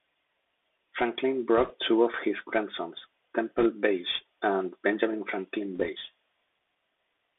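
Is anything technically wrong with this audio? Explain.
Yes, two problems. Throughout, the Bluetooth CVSD headset codec confines the speech to roughly 250 Hz to 3.6 kHz; its one-bit slope tracking adds granular hiss and scratchy sibilants, and the spectrogram shows a hard ceiling.

Bit errors on the Bluetooth voice link cause crackly rushing bursts at 1.58 to 1.73 s, just before "two of his grandsons", at 3.58 to 3.67 s, just after "two of his grandsons", and at 5.76 to 5.89 s. They appear as broadband speckle, not tall waveform spikes, because flipped step bits decay quickly.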